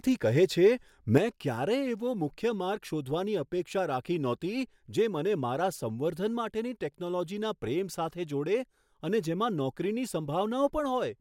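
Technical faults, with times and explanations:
1.18 s to 11.20 s, one channel drops out. At 1.18 s the speech abruptly falls by about 6 dB and stays lower until the end. The likely cause is one stereo channel going silent, so the mono sum keeps only half the shared signal.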